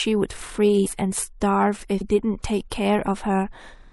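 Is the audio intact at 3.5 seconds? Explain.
No. At 3.5 seconds, as throughout the speech, there is plainly audible MP3 compression damage, likely from a low bitrate near 64 kbps. Starved of bits, the encoder truncates the treble and toggles weak frequency lines frame to frame, giving a watery, swirly sound with chirpy sibilants. Plain low-pass filtering would sound dull but steady, without that flicker.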